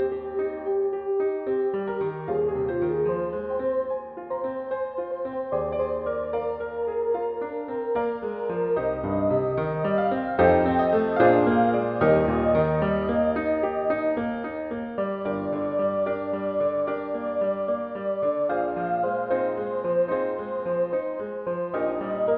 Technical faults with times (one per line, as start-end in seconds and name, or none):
none